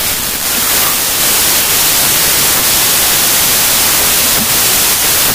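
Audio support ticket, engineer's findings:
Wrong sample width across the whole clip: packed 24-bit data read as 16-bit. Speech buried in loud noise, slowed to 0.667× speed with lowered pitch.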